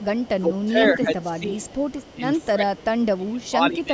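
A faint delayed copy of the speech trails it by about 158 ms at 0 to 0.29 s, 0.62 to 0.88 s (loudest, roughly 15 dB down), 1.83 to 2.47 s (quietest) and 3.02 to 3.06 s. This is an echo leak, likely a far-end speakerphone whose echo canceller let some of its loudspeaker output back into the call. From 0.35 to 1.79 s and again from 2.14 s to the end, the voice dips and thins by up to about 15 to 20 dB. This is speech suppressed in double talk: with both sides talking at once, the echo canceller likely turned down the talker along with the echo.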